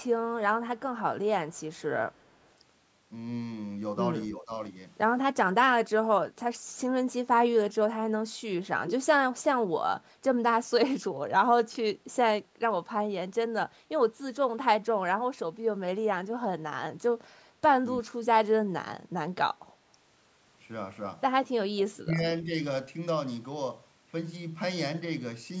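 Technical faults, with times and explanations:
1.51–1.82 s, 2.16–2.47 s and 8.87–8.95 s, echo leak: a copy of the speech returns about 318 ms late, barely audible in the first two and much stronger at 8.87 s. This is likely from a loudspeaker echo the canceller missed. On a spectrogram the speech pattern repeats, shifted in time.
4.37–4.51 s, 5.34–5.67 s, 18.02–18.23 s and 21.61–22.17 s, speech suppressed in double talk: the speech dips or cuts out briefly, by roughly 15 dB at first and by 25 to 35 dB later. This is likely an echo canceller that could not separate the two sides and turned both down. The waveform shows sudden notches in its envelope.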